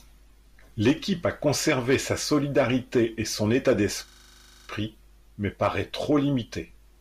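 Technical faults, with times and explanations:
4.08–4.68 s, system hang loop: the computer or audio driver stalled while the sound hardware kept replaying the last 40 ms stretch of its ring buffer, so one fragment of speech repeats exactly about 15 times over 0.6 s. Repeating at 25 Hz, the loop turns that slice into a rough, mechanical buzz with no speech moving through it. When the system recovers, the speech resumes with essentially nothing missing.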